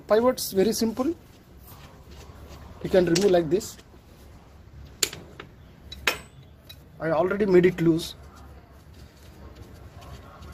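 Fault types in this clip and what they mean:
Call bitrate drop: from about 1.08 s to 6.47 s the audio turns coarser and rougher, with the worst stretch lasting around 4.1 s before things clean up again. It sounds like the call's bandwidth estimate sagged and the encoder was pushed from something like 48 kbps down to roughly 16 kbps. With that few bits to work with, the detail gets smeared into a grainier texture until the rate climbs back.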